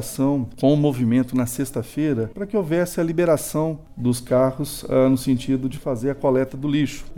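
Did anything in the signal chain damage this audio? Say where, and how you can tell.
No, nothing audible points to damage at any stage of the signal chain.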